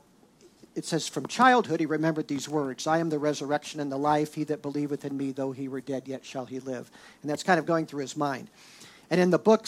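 From 2.17 s to 5.30 s the audio carries periodic clock jitter at around 1 kHz. Interference modulates the converter's sampling clock, putting sidebands about 1 kHz above and below every component, strongest on high-frequency content, which gives the sound a rough, metallic edge.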